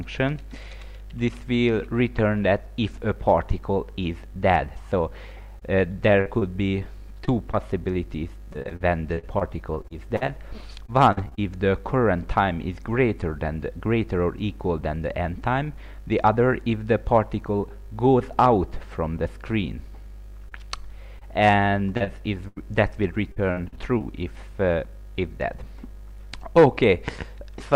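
Repeated packet loss (robotic sound) hits twice. From 5.59 to 11.39 s, packets go missing again and again, and each gap is filled by extending the last bit of sound. That produces around twenty short holes, the longest 48 ms, covering about 9% of the stretch, so the audio turns choppy. The same failure returns from 20.49 to 24.02 s with about ten gaps, one reaching 82 ms, which leaves a stuttering patch.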